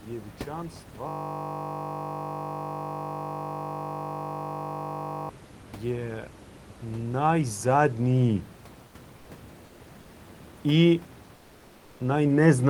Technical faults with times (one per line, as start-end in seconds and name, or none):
1.08-5.29 system hang loop
5.55-8.47 automatic gain rising
9.65-9.79 comfort noise in place of the background
11.35-11.99 comfort noise in place of the background